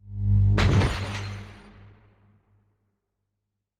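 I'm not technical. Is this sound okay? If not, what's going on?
No. Two things went wrong on the way to your ears.

First, a skip ahead at about 0.37 to 0.39 seconds. The system threw away a chunk of audio, roughly 0.4 seconds of it, while the next part was already waiting, and went straight on to that next part. Nothing was put in the gap, so the sound jumps forward almost instantly and the missing piece is simply gone, with the two sides stitched together directly.

Second, a jitter buffer speed-up from about 0.99 to 2.43 seconds. The receiving end had built up more stored audio than it wanted, so to catch up it kept snipping out tiny slivers, removing about a fifth of a second in total. The result plays at 114% speed without any change in pitch, which is fast enough that this stretch sounds rushed.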